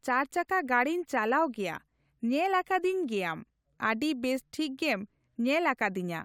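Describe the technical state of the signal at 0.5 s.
At 0.5 s the speech signal is intact, with no dropout, distortion, noise or other technical fault audible at that moment.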